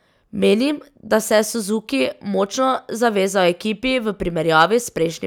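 Nothing technically wrong turns up anywhere in this short speech recording, so there's no fault to place in time or trace to a cause.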